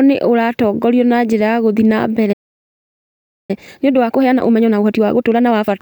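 At 2.32 s, right after "njĩra ya gũthiĩ na", the speech cuts off mid-flow and silence holds for about 1.16 s until 3.51 s. This is a playback stall, likely the player running short of data or its output thread being blocked before recovering. From 3.51 s to 5.71 s the speech comes out hurried, about 1.5 times normal speed, at its usual pitch. This is time-compressed catch-up: the player shortens the backlog left by the stall by cutting out small pieces and cross-fading over the joins.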